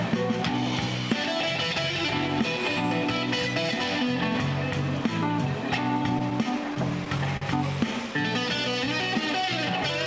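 Between 6.04 and 7.43 s, packets reached the jitter buffer late or slower than playback, so it ran dry nine times and the receiver held the last sound over each gap. These repeated stalls (stutter) total 122 ms, the longest 45 ms. Nothing is lost, but the sound drags and catches.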